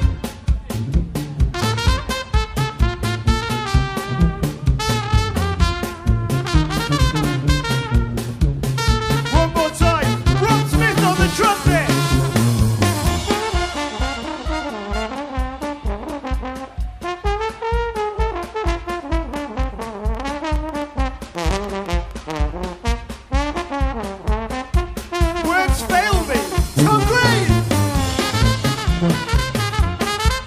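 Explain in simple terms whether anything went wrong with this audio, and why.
Between 19.34 and 22.12 s there is a train of clicks: about ten sharp ticks at roughly 3.6 per second, unevenly spaced and louder than the sound beneath them. They most likely come from electrical interference or a faulty connection or power supply.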